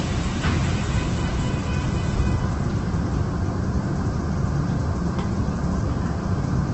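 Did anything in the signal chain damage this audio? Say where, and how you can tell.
Yes, the codec stage, and it's there for the whole clip. Nothing reaches above 8.2 kHz, and the tonal parts come out grainy and rough rather than swirly, as if noise has been filled in where detail should be. That's Opus compression, likely in its CELT music mode: when bits run short it keeps each band's energy but refills the contents with folded or noisy material, and the narrow top end points to a very low rate, around 12 kbps.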